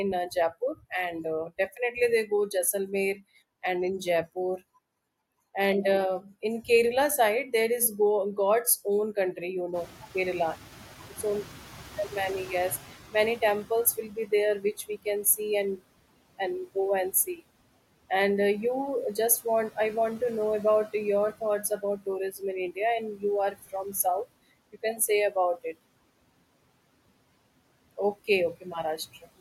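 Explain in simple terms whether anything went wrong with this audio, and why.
Around 9.5 s the room's background noise jumps up, and the noise suppressor is slow to catch up. From 9.74 s to 14.02 s the noise comes through only partly reduced, then fades over about 4.3 s as the suppressor relearns the new noise level.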